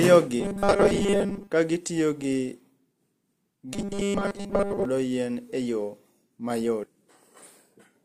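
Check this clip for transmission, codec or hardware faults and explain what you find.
Two kinds of fault show up in this speech clip: a robotic buzz in two stretches, and one jump where part of the stream goes missing.

From 0.40 to 1.50 s, and again from 3.74 to 4.85 s, you get robotic sound from repeated short buffers. The speech goes rigid and metallic, locked onto a steady 200 Hz buzz while still loosely tracking the words. That pitch fits a 5 ms chunk being replayed over and over. The likely cause is audio arriving too slowly, so the software keeps looping its last buffer and skips real material. Most of each stretch is repeats rather than fresh audio.

Around 6.83 to 6.86 s there's a stream segment skipped. The sound lurches forward with a small blip, as if a piece of the programme simply isn't there. Most likely one chunk of a segmented stream failed to load, and the player carried on with the next one. 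Whatever that chunk held is gone, so the speech jumps ahead rather than pausing.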